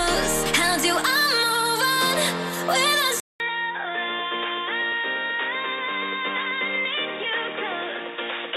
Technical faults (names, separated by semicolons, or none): MP2 compression; input switched to a poorer device